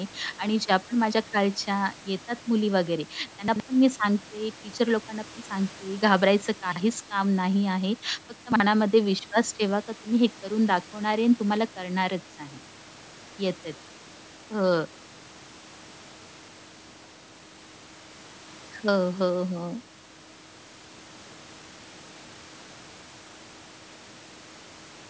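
Speech with chunks out of order at 3.48–3.6 s, 6.72–6.8 s and 8.52–8.6 s. Each time, a 40 ms piece of audio plays after pieces that should follow it: two chunks late at 3.48 s, one late at the others. The result is a brief jumbled stutter. On a waveform, three abrupt discontinuities sit within each span. A spectrogram shows vertical broadband lines there and mismatched harmonic tracks, above a band that stops at 8 kHz.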